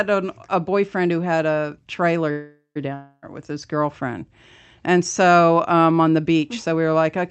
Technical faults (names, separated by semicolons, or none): call audio freeze; long network dropout